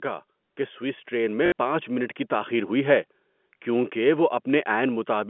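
Automatic gain rising runs from 0.56 to 2.25 s in this speech clip, ending just before "تاخیر ہوئی ہے کیونکہ". The gain control judged the input too quiet and lifted its gain slowly, by about 6 dB over roughly 1.7 s, so the voice and the background noise swell together rather than the speech alone getting louder. Packet loss with the last packet repeated falls inside that rise, from 1.46 to 1.52 s. For 60 ms the receiver kept replaying the last audio it had received. That span fits three lost 20 ms packets. The replays form a brief robotic stutter that buzzes at about 50 Hz. Underneath both faults, the telephone-band character of the G.711 line, limited to 200 Hz to 3.4 kHz, can be heard throughout.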